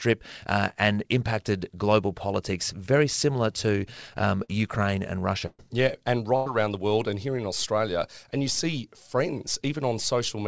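At 4.44 s a short concealed packet loss fills roughly 40 ms that never arrived with 43 ms of continued sound before blending back into the real signal. It is heard as a brief smear or wobble. On a spectrogram the last sound runs on unnaturally smooth for a few frames before the seam.

Two bursts of packet loss follow, from 5.46 to 5.63 s and from 6.36 to 6.48 s. In each, several consecutive packets were lost, about 120 ms and 100 ms of audio. The receiver extended the last sound for 124 ms and 95 ms, letting it fade. The first burst also ends in about 20 ms of silence. Each burst is heard as a held buzz or fading hiss, with the audio resuming further on. On a waveform each shows a decaying stretch. In the first burst this drops to silence. On a spectrogram each shows frozen, dimming bands. Throughout, nothing appears above 8 kHz, which points to a G.722 call codec.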